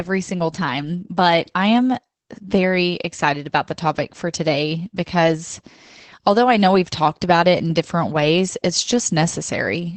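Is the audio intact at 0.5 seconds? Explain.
No. Opus voice compression runs through the whole clip, including 0.5 s. The SILK linear-prediction coder leaves nothing above 8 kHz and codes the excitation coarsely, consistent with roughly 12 kbps, so the speech sounds muffled, hoarse and slightly robotic.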